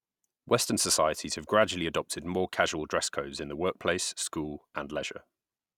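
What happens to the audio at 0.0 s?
Nothing goes wrong at 0.0 s; the audio is intact, with no dropout, click or distortion at that moment.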